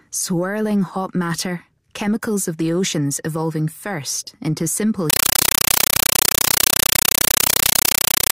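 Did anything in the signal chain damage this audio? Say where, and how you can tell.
Yes. The damage is at the playback stage: from 5.10 s to the end at 8.35 s, the sound is replaced by very loud, chattering static. This is a compressed stream played as audio. Dolby Digital (AC-3) data went out over the digital link and was read as ordinary samples rather than decoded. Each 8 ms burst of noise is one data frame followed by zero padding. The bursts repeat at 31.25 Hz, which fits AC-3 framing. On a waveform this shows as loud noise blocks separated by flat silences. On a spectrogram it appears as broadband vertical stripes every 32 ms.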